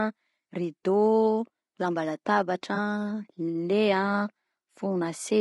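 From start to finish the speech sounds rough and grainy, with a hiss filling the gaps between harmonics and a thin, synthetic-sounding top band. This is likely low-delay AAC compression (AAC-ELD): its short frames resolve pitch poorly, and the damage fits a rate of around 32 kbps.

From 2.75 to 2.78 s there is a brief smeared, noisy patch where about 20 ms of audio went missing. This is AAC frame loss with concealment: the decoder rebuilt the gap from the last good spectrum, which fills the hole but blurs the detail.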